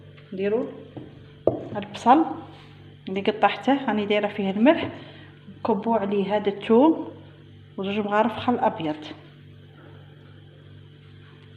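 No technical faults can be heard in this audio.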